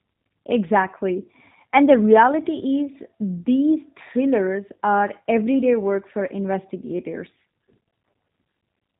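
Throughout, plainly audible G.729 codec damage: nothing above 4 kHz, plus a rough, synthetic edge from model-rebuilt speech that simple band-limiting lacks, fitting 8 kbit/s.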